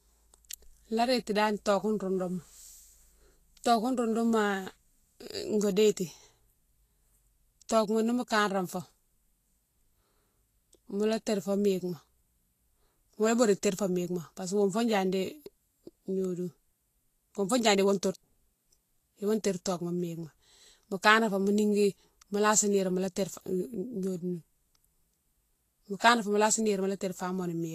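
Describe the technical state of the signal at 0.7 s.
At 0.7 s the speech is likely passing through low-rate Vorbis compression, as across the whole clip, which fits roughly 34 kbps: treble above 14.2 kHz is gone and the coarsely quantised top turns grainy and hissy.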